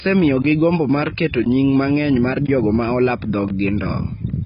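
Speech that sounds dull, smeared and warbly, with nothing above 5.1 kHz, likely from heavy AAC compression at a bitrate as low as about 16 kbps. Short silences of 20 ms fall at 0.42–0.44, 1.44–1.46, 2.46–2.48 and 3.48–3.50 s, 1.02 s apart. These are gaps between chunks, where silence was inserted at each join of one-second pieces.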